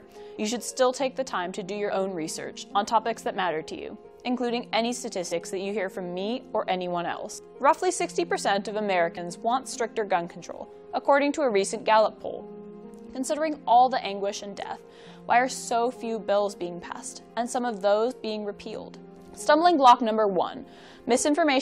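Three brief interruptions break the audio at 5.31, 9.16 and 18.1 s, each a jump forward. Each is a case of compressed frames skipped: whole blocks of encoded audio went unplayed, missing or rejected as damaged by the decoder. At each point roughly 50 ms of sound vanishes, which fits losing about two 23.2 ms frames.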